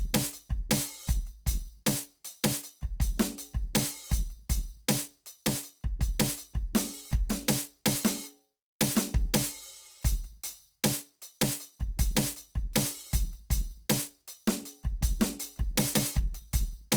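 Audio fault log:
throughout, Opus compression: the music sounds rough and grainy, with tonal parts turned noisy rather than swirly, because band energies are kept but thin bands get filled with folded or noise content. That's likely Opus in its music mode, fitting roughly 24 kbps, still fullband to about 20.2 kHz.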